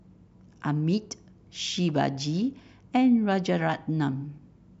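Nothing in the speech recording stood out as a technical problem on listening.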